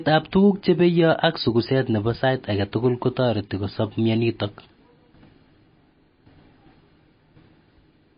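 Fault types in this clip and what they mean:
MP3 compression: The speech sounds dull throughout, with nothing above 5.1 kHz, and has plainly audible watery, swirling artefacts, likely from MP3 encoding at a low bitrate near 24 kbps. Unlike a plain low-pass filter, faint detail flickers between frames and smears consonant attacks.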